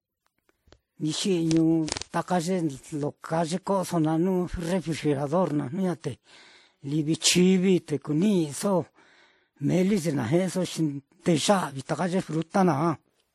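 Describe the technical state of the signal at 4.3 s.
At 4.3 s the speech carries the smeared, swirly artefacts of transcoding between lossy codecs, present across the whole clip. The sound points to a WMA encode near 64 kbit/s likely re-encoded as MP3 near 52 kbit/s, stacking both codecs' damage. A spectrogram shows a hard ceiling at 15.5 kHz and blotchy high bands.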